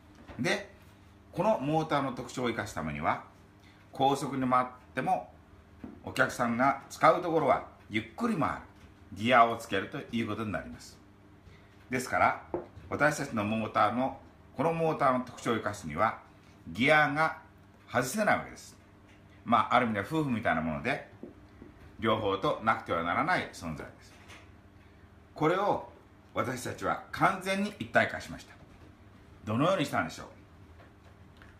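Nothing technically wrong can be heard in this clip. The audio runs without any audible interruption or damage.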